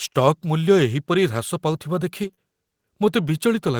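At 2.23 to 2.25 s a single packet went missing, but the packet that followed it carried a low-bitrate backup copy, and the decoder played that copy in its place. This is a lost packet rebuilt from error correction. No gap opens up. Instead, about 20 ms of speech comes through coarser and noisier than the audio around it, a short rough patch rather than a dropout.

Right after that, the stream failed three times in a row, at 2.27 to 2.31 s, 2.31 to 2.34 s and 2.34 to 2.39 s. Each time about 20 ms of audio arrived too late or not at all, which fits one missing 20 ms packet per event. These are short concealed packet losses. The receiver covered each hole by extending the preceding sound and then blended back into the real signal, for roughly 18, 13 and 26 ms. Together they make a brief smeared, wobbling stretch of about a tenth of a second.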